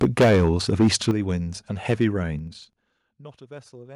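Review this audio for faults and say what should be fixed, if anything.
From 0.01 to 1.11 s the loudest peaks are flattened, with about 12 dB more signal than the converter could hold and roughly a tenth of the samples cut off. A shorter burst follows at 1.89 to 2.05 s, about 3 dB over, with a few percent of samples clipped. The cause is likely microphone overload, where input gain is set so high that peak tops are sheared off. It differs from zipper noise because the crackle follows the loudest syllables rather than a steady ticking rhythm. Prevention: set input gain so peaks stay several dB below full scale.

The level drops abruptly twice, at 0.04 s by about 2 dB and at 1.11 s by about 8 dB. The second drop coincides with the end of the long clipped stretch, and both sound and background fall together. This is likely microphone volume stepped down, where call software reacts to overload by cutting device input in one jump. 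These changes are instant. Prevention: fix the gain at the source so the software never needs to intervene.

Between 2.30 and 2.99 s a fast ticking rides on the sound as the level falls by roughly 20 dB. This is zipper noise: the gain moves in 3 dB jumps about ten times a second with no ramp between them, and each jump leaves a small click. It is a regular, evenly spaced patter tied to the level movement, which separates it from clipping crackle that tracks the loudest peaks. Prevention: interpolate gain changes per sample or smooth them over a short ramp.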